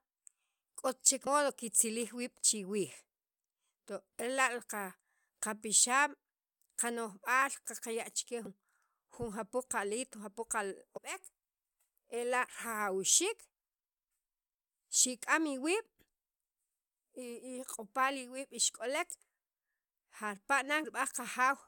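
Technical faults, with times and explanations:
1.26 s, 8.45 s, 10.96–10.98 s, 12.47 s and 20.83–20.85 s: damaged data in a compressed stream. Corrupted bytes break the decoder's frame sync. Each time it misreads a frame and hunts for the next header. This gives a brief chirp or blip, about 12 to 20 ms long.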